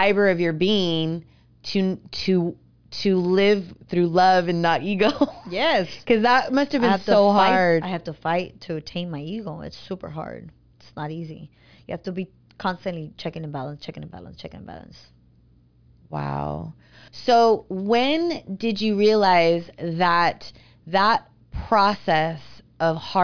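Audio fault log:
No technical faults are present in the speech signal at any point.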